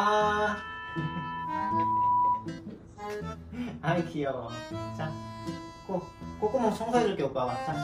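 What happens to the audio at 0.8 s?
At 0.8 s a loudspeaker feedback squeal is building. From 0.38 to 2.51 s a single tone at 985 Hz rises out of the sound, swelling over about a second and a half until it sits roughly 5 dB above everything else. A microphone is picking up the loudspeaker it drives, and at that one frequency each trip around the loop comes back louder. Unlike a steady hum or test tone, it starts faint and grows on its own.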